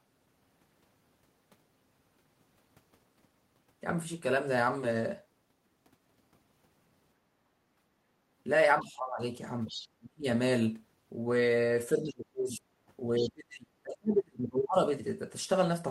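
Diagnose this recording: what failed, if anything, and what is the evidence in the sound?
In call processing, the echo canceller clamped the microphone during loudspeaker playback, so the background is gated by the echo canceller: room sound dips about 13 dB from 7.21 to 7.8 s.

The canceller likely confused the talker with loudspeaker echo, causing speech suppressed in double talk: the voice drops sharply at 8.83–9.22, 9.95–10.25, 11.95–12.65 and 13.2–14.76 s.

Incomplete echo removal likely lets the other side's voice leak through as faint scraps well below the talker at 9.67–9.88, 12.08–12.57 and 13.17–13.3 s.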